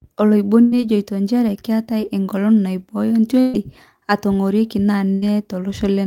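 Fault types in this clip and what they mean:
Burst of packet loss: lost audio packets concealed by fading the last sound, heard three times as brief held buzz or hiss, then speech resuming with roughly 60 to 120 ms missing.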